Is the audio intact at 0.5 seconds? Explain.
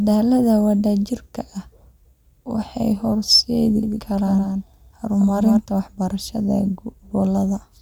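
Yes, the speech at 0.5 seconds is intact, with no dropout, distortion or other fault at that moment.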